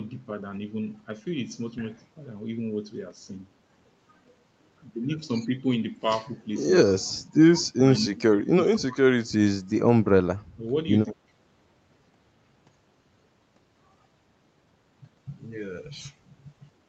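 At 7.97–8.01 s and 11.07–11.13 s, an echo leak adds a faint delayed copy 156 ms late, about 25 to 30 dB below the speech. It likely comes from loudspeaker sound that the echo canceller missed. At 8.04–8.46, 8.66–9.33, 10.51–10.65 and 11.06–11.28 s, the talker's own speech drops by about 20 to 25 dB in short pieces. This is speech suppressed in double talk, likely the canceller turning everything down while the far side spoke. Unlike the echo, which adds a second copy, here the original sound is taken away.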